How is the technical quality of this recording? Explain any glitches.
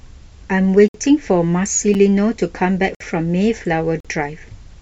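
The speech is broken by four short, hard-edged dropouts at roughly one-second intervals. These are gaps between stream segments: the segment time stamps leave small holes, which the player fills with silence. Gaps fall at 0.88–0.94 s (about 59 ms), 1.94 s (6 ms), 2.95–3.00 s (55 ms) and 4.00–4.05 s (43 ms). The one-second spacing fits 1-second segments. No audio is lost, only interrupted.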